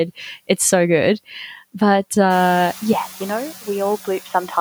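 Throughout the speech the background sinks in the pauses and swells back under each phrase. These are noise suppressor artifacts: the processor estimates which frequency bands hold steady noise and pulls them down frame by frame, here by about 6 dB, so the gating follows the voice. After about 2.5 s the room noise rises by about 14 dB and sits about 20 dB below the speech, giving the suppressor more to work against.

At 2.93 s, and through to the end, the speech turns duller and more boxy. There is no gap at the change, no obvious jump in loudness, and the new background is very faint, far below the voice. This is most likely an input switched to a poorer device, such as another microphone or a headset's call profile, whose narrower band and different tone take over mid-recording.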